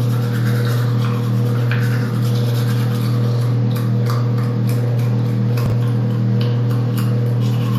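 An everyday sound recording with chunks out of order between 5.66 and 5.72 s. One 20 ms chunk plays two chunks late, after the audio meant to follow it. Nothing is missing, but the reordering creates three hard joins, heard as a brief jumbled stutter.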